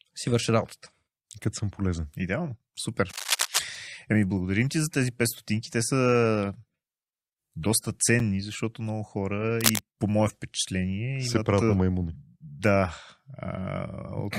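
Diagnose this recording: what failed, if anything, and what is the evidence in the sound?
Analogue wiring: cable scratch noise at 3.09 to 3.59 s and 9.58 to 9.81 s. Dense, uneven rustling about as loud as the speech, likely from a worn contact moving, unlike clean isolated clicks.

Playback of a segmented stream: a gap between stream segments at 8.19 s. A hard-edged 7.8 ms silence, which fits 2-second segments. Unlike a dropout, no speech is missing.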